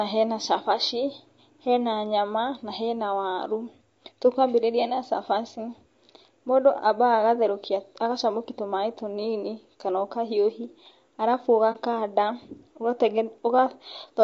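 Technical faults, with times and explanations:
Throughout: low-delay AAC compression. The speech is plainly rough and grainy, with noise between the harmonics and a thin, synthetic top band. This is likely AAC-ELD, whose short frames resolve pitch poorly and waste bits; the damage fits roughly 32 kbps.
11.72–11.77 s: AAC frame loss with muting, right after "tũnini kana ũkahiũhi arabu". About 30 ms of audio briefly dips, consistent with one lost frame zeroed by the decoder. The overlapping windows fade it out and back in, so it is a brief, soft dip rather than a hole.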